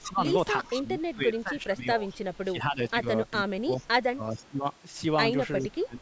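Speech that is repeatedly ducked, with a faint echo underneath. The speech suppressed in double talk shows up at 0.0–0.23, 0.63–3.05, 3.41–3.71, 4.11–4.66 and 5.61 s to the end, where the level dips by roughly 15 to 25 dB in patches. The likely cause is an echo canceller pulling down its own talker while the far side speaks. Unlike a simple gain change, it follows the overlap and leaves the level choppy. The echo leak is a faint delayed copy, around 30 dB below the speech, at 2.09–2.37 and 3.8–3.86 s. It trails by 407 ms, likely loudspeaker pickup that the canceller failed to remove. That fixed lag separates it from room reverberation, which blurs directly into the sound. The band stops at 8 kHz, consistent with normal call microphone processing.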